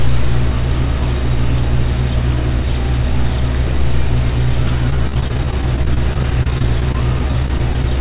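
From 4.9 to 7.84 s the audio turns choppy and robotic, with dozens of tiny holes, none longer than 24 ms. This is repeated packet loss: about 15% of the stretch is patched by extending the preceding sound, and the whole clip is limited to 4 kHz, consistent with a G.711 call path.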